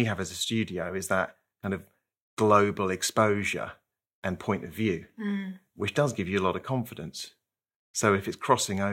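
A scratch on the disc defeats error correction once per revolution, so the player patches the lost samples, and this speech clip picks up CD scratch ticks from 7.20 to 8.24 s, just after "you a lot of": six tiny clicks, each only a millisecond or two, about six per second.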